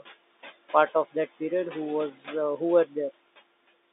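Throughout the clip, noise suppressor artifacts pull the room noise down by about 18 dB between phrases, so the background pumps against the speech. At 2.15 to 2.27 s, just before "uh who were", speech cut by the noise suppressor briefly treats the speech as noise and drops it by up to about 7 dB over roughly a tenth of a second, so it sounds swallowed. At 3.28 s, after "uh who were", packet loss with the last packet repeated fills a 20 ms gap, consistent with one lost 20 ms packet, by replaying the previous audio, which gives a small blip.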